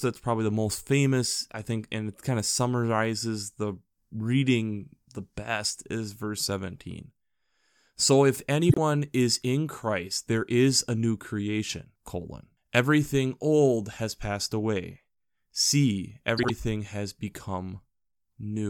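Frames out of order twice: at 8.69 to 8.78 s, just before "is in", adjacent blocks of about 26 ms were decoded swapped, then again at 16.38 to 16.50 s with about 52 ms blocks. Each stretch plays with its halves exchanged, giving a brief garbled flutter and no lost time.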